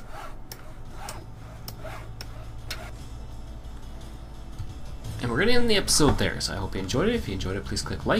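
No technical faults can be heard anywhere in this audio; the signal stays steady and intact throughout.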